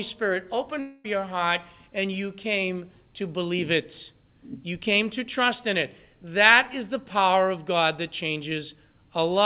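From 0.8 to 1.06 s the speech breaks off into a buzzy, smeared continuation of the last sound, roughly a quarter second, before "your heart and you" resumes. That's likely a long network dropout, with the receiver filling the lost audio rather than leaving silence, all within the call path's 4 kHz band.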